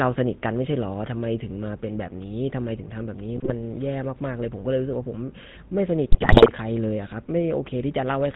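The speech has been carried through the GSM full-rate codec, which fits a 13 kbit/s link. It rebuilds the voice from a vocal-tract model excited by evenly spaced pulses, dropping two of every three excitation samples and nothing getting through above 4 kHz. The result is plainly audible for the whole clip: a dull, band-limited tone with a buzzy, gravelly roughness riding on every voiced stretch.

GSM bit errors then corrupt the decoder's input twice. From 3.36 to 3.54 s, flipped bits land in the frame parameters, so the spectral shape and gain are briefly wrong and the voice breaks into a short squawk and gargle. From 6.12 to 6.50 s a longer, denser run of errors hits, and the level and timbre lurch frame by frame into pops and gargling before the speech recovers.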